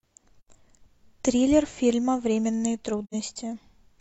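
AAC frame loss with muting leaves two soft-edged gaps in the speech, at 0.41–0.49 s and 3.04–3.15 s, each about 85 ms, which fits two lost frames that the decoder zeroed. The overlapping windows taper the sound out and back in, so the waveform narrows smoothly to near-silence, and the spectrogram shows a blank vertical band across all frequencies with blurred edges.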